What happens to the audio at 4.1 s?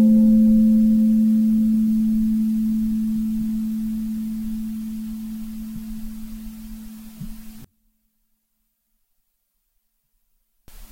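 Nothing goes wrong at 4.1 s: the sound carries on intact through that moment, with no dropout, click, distortion or other fault.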